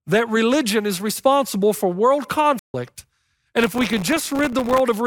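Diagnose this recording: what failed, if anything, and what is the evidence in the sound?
The speech cuts out abruptly from 2.59 to 2.74 s, about 150 ms of silence in mid-flow, then resumes. This is a playback stall at the playback stage, likely the player's buffer running dry or its output thread being blocked until it recovered.

From 3.61 to 4.80 s a gritty burst of crackle rides on the speech, made of many tiny hard-edged dropouts to silence. This is processor overload crackle at the driver or buffer stage: repeated missed deadlines on very short buffers, which fits well over a hundred sub-millisecond gaps.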